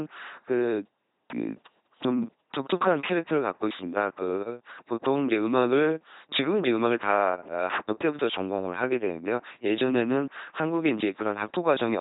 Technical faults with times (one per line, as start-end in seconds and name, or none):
0.00-12.00 LPC-10 vocoder